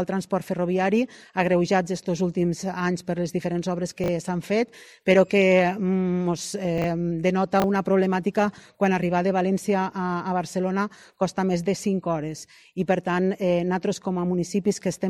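At 4.04 to 4.08 s, 6.78 to 6.84 s and 7.6 to 7.64 s, the audio has chunks out of order: a 20 ms chunk plays one slot late at the first and third points and two slots late at the second, so it plays after chunks that should follow it. Each is heard as a brief jumbled stutter. On a waveform, three hard discontinuities show at each spot. On a spectrogram, thin vertical broadband lines show where the frequency content jumps.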